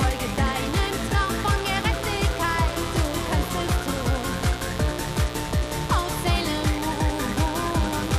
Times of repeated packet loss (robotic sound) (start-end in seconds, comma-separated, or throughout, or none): none